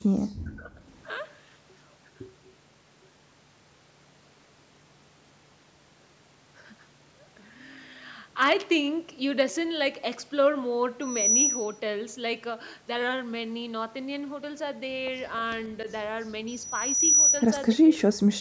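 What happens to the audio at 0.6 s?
From 0.41 to 0.71 s the speech is pushed down by about 40 dB, likely speech suppressed in double talk: the echo canceller mistook overlapping talk for echo and muted it. Unlike a packet-loss gap, it is a ducking of the talker, not a clean digital silence.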